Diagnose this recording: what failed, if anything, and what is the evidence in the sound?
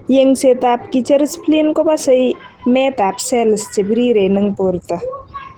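The codec stage is where this went wrong, and it's likely Opus compression. The speech is hoarse and grainy from start to finish, with the bandwidth still full. That points to Opus at a low rate, around 16 kbps, in its hybrid speech mode, where bits run short.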